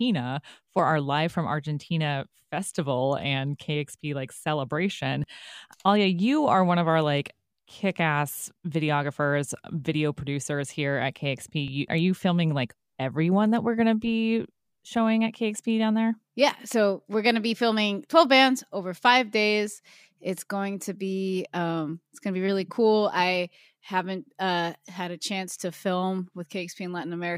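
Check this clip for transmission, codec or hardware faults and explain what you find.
Three small skips in the speech, all the same kind of fault: a dropped buffer (overrun), likely, at 0.79 s, at 5.24 s just after "like celebration", and at 11.68 s just after "video producers here at". Each time a tiny slice of around 10 ms goes missing, probably because the samples weren't read before the hardware wrote over them. The two sides butt straight together with no gap, so you hear a slight jump forward.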